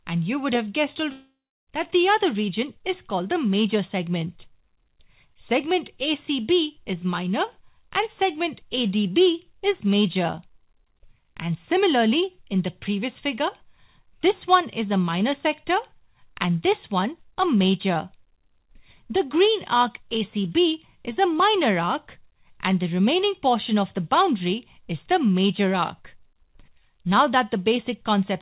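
From 1.12 to 1.7 s the sound cuts out. The last moment is stretched into a fading buzz, followed by 0.34 s of near silence. Playback resumes with about 0.56 s lost. This is likely a long network dropout.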